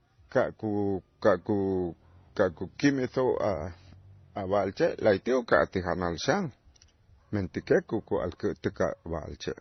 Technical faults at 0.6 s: transcoding between lossy codecs

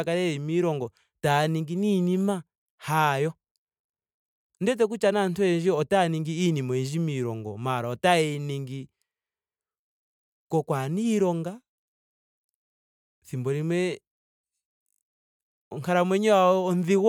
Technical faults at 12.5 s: none

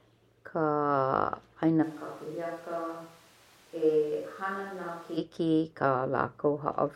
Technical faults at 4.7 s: switch to a distant microphone

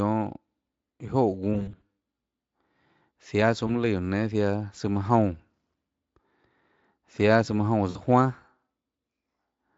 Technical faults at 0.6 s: none

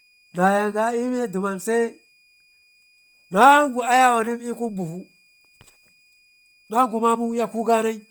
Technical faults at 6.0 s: switching supply whistle; Bluetooth LC3 compression

